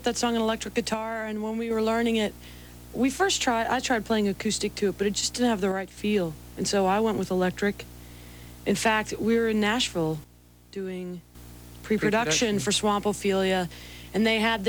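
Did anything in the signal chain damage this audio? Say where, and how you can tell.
Yes. Sudden gain jumps at 0.94–1.71, 5.72–5.97 and 10.24–11.35 s drop sound and noise together by about 6, 6 and 9 dB. This is likely an unramped digital gain step.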